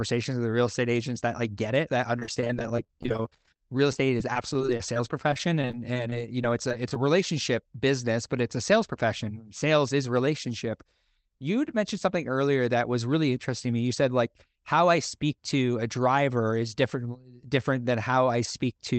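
Choppy, robotic speech runs from 2.19 s to 6.96 s, where the sound keeps breaking into brief stutters. This is repeated packet loss (robotic sound): about fifty short holes open across that stretch, none longer than about 26 ms. Each one is patched by extending the last sound, so roughly 12% of the span is covered by stretched-over filler. Above the speech, the call path's Opus coding stops near 8 kHz.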